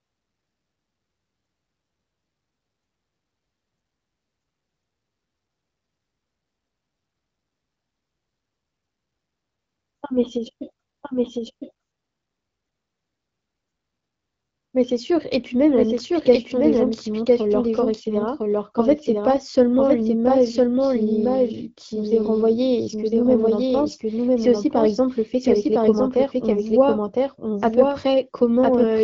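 From start to finish the speech is heard twice: a second, full-band copy trails about a second behind the first at roughly the same loudness. This is a doubled audio track, most likely from the sound being captured again through a slower path. Unlike an echo or room reverb, the copy doesn't fade, repeats only once, and carries no added room colour. It sits over the HD Voice band, which stops near 7.5 kHz.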